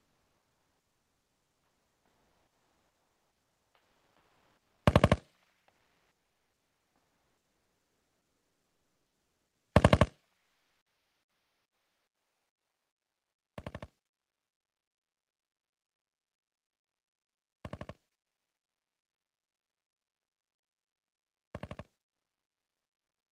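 Comfort noise in place of the background runs from 0.0 to 4.85 s and again from 5.71 to 9.71 s: the real background gives way to a steady, featureless hiss, about 1 dB louder in the first stretch and about 1 dB quieter in the second, likely from Opus discontinuous transmission synthesising noise while sending paused.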